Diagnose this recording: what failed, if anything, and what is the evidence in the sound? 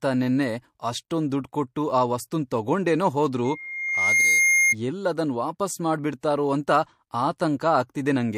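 Two hisses smear the onsets right before sharp attacks. One lands at 1.30 s, between "ನೆನ್ನೆ ಅಷ್ಟೊಂದ್" and "ದುಡ್ಡ್ ಕೊಟ್ಟು ಆ ವಸ್ತುನ್", rising about 10 dB over 19 ms. The other runs from 6.21 to 6.23 s, just after "ಎಲ್ಲ್ ಅದನ್ ವಾಪಸ್", rising about 22 dB over 25 ms. This is codec pre-echo. The quantisation noise for each attack spills into the quiet just before it, which fits a transform codec using blocks of about 36 ms that never switches to short blocks.

From 3.44 to 4.75 s, right after "ಕೊಟ್ಟು ಆ ವಸ್ತುನ್ ತಗೊಂಡೇನೋ", a steady 2.1 kHz tone swells over roughly 0.7 s. It settles a few dB above the speech and clears before "ಎಲ್ಲ್ ಅದನ್ ವಾಪಸ್". That is loudspeaker feedback squeal, which arises in the acoustic and analogue stage. The microphone heard its own loudspeaker, and at 2.1 kHz the loop gain passed unity, so that frequency grew by itself.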